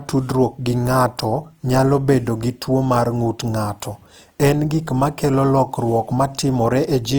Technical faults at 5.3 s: Opus compression

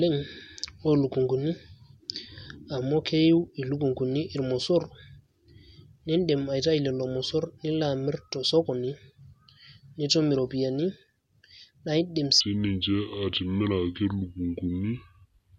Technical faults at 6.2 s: none

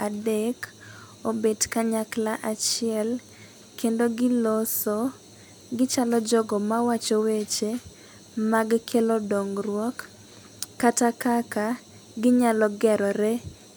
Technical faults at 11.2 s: none

